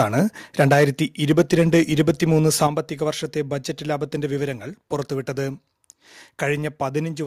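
Speech with repeated microphone overload, where the loudest passages are flattened at the converter's ceiling and take on a harsh, crackling edge. It is worst from 0.6 to 0.85 s, driven about 8 dB past full scale, with a noticeable share of samples clipped. It is milder from 1.3 to 2.24 s and again from 2.61 to 2.65 s, both about 3 dB over, with only a small fraction of samples cut. The likely cause is input gain set too high for the peaks. Two microphone volume step-downs follow closely on distorted peaks. Voice and background drop together by about 3 dB at 0.74 s and by about 8 dB at 2.67 s, each as a single abrupt step rather than a fade. This pattern is likely the call software's automatic gain control cutting the device's input level after detecting clipping.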